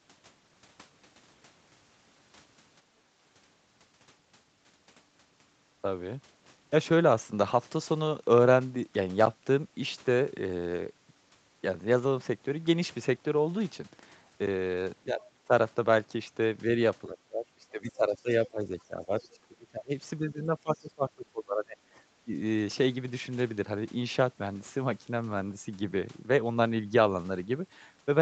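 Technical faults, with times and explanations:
15.13–22.32 s, speech suppressed in double talk: the talker's speech dips three times, by about 25 dB over roughly 0.3 s within 15.13–15.52 s, by about 20 dB for around 3 s in total across 17.08–21.77 s, and by about 15 dB for a brief moment at 22.25–22.32 s. It sounds like the voice is being ducked or chopped while the far end talks. The likely cause is the echo canceller failing to separate the near talker from loudspeaker echo and turning both down.
15.21–20.86 s, other side's voice leaking through: there are three very short scraps of a second voice, at 15.21–15.29 s, 19.24–19.29 s and 20.80–20.86 s. They sit about 30 dB below the speech for the first two and about 40 dB below for the last, so they're faint, clipped blips rather than clear phrases. That's likely far-end audio from the loudspeaker that the echo canceller didn't fully remove, slipping out in the same stretches where suppression kicks in.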